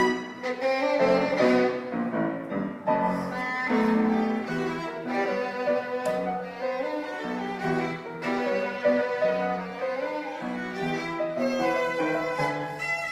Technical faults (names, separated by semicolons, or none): none